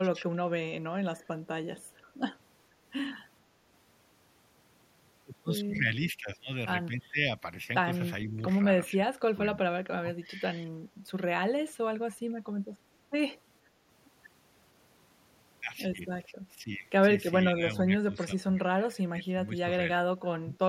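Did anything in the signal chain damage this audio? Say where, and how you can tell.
Yes, in call processing. There's speech suppressed in double talk at 1.04–1.28, 6.17–6.29, 8.29–8.6, 9.06–9.4, 10.18–10.41, 16.29–16.7, 17.54–19.66 and 20.06–20.55 s. The voice sags by roughly 5 to 20 dB, deepest around 9.1 s and through that long 17.5–19.7 s stretch. That's likely the echo canceller mistaking near speech for echo during overlap and pulling everything down.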